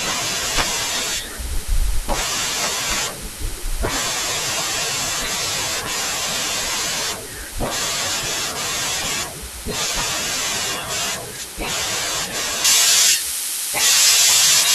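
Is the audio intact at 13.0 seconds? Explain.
No. Pre-emphasis left on affects the speech from 12.65 s to 14.75 s: the treble was boosted for transmission, following what sounds like a J.17-style curve, and the matching de-emphasis was never applied. Highs sit about 11 dB above 1 kHz at 10 kHz, so the speech sounds thin, bright and sibilant.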